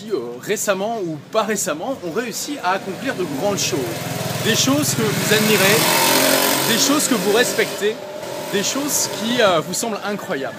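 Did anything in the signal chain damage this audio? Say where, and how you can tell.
No, nothing I can hear points to damage at any stage of the signal chain.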